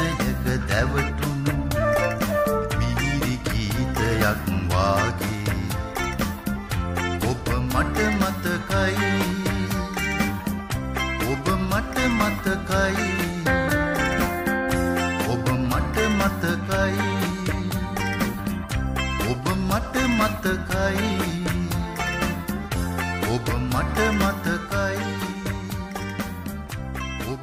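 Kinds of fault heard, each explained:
No faults of any kind are heard here.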